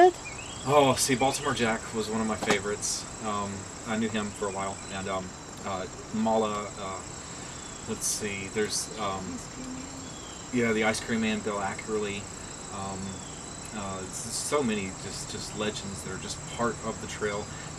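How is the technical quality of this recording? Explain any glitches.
One glitch stands out: a time-stretched section from 3.97 to 6.97 s. The pace jumps to about 1.69 times normal while pitch holds steady. It sounds rushed. Software likely squeezed it to fit a length, dropping short pieces of sound to keep pitch.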